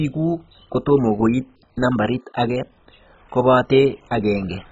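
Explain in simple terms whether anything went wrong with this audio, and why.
Yes, the speech sounds dull and gurgly from start to finish, with nothing above 7.5 kHz. That is likely MP2 compression squeezed hard: upper bands switch off and flicker, leaving a granular warble that a plain treble cut wouldn't add.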